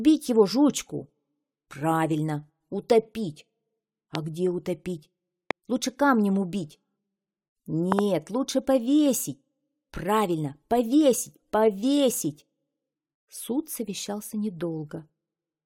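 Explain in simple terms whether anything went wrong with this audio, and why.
Loud pops hit at 4.15, 5.51 and 7.92 seconds, the last a quick double. Each is likely a brief electrical jolt. The sound carries on underneath.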